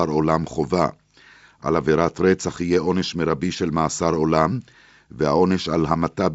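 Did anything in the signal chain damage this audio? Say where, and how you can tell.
No, nothing in the signal chain damaged this speech.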